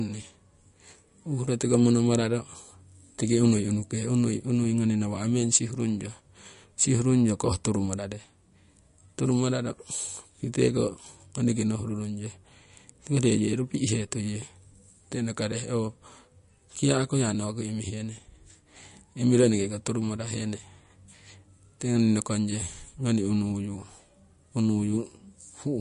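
Speech with MP3 compression damage that is plainly audible throughout, the likely cause being a low-bitrate encode: nothing reaches above 10.6 kHz, and weak spectral detail flickers between frames into a watery swirl with smeared consonant attacks, which points to roughly 44 kbps.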